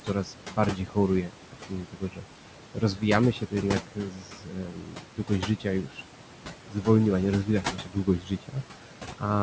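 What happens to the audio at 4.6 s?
At 4.6 s you're inside a stretch of speech cut by the noise suppressor, running from 3.87 to 6.86 s, just after "się to". The suppressor mistook parts of the speech for background and pulled them down with it, by about 13 dB at the deepest, for roughly a second and a half in total. Those bits come across swallowed and faint. There's also a DC offset under the whole clip, including this moment. The waveform sits shifted off zero by a constant amount, so you won't hear it as such, but it eats into headroom and shows up as steady energy at the very bottom of the spectrum.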